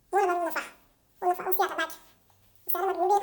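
From start to finish the speech plays at double speed and an octave high, because the audio was read two samples at a time.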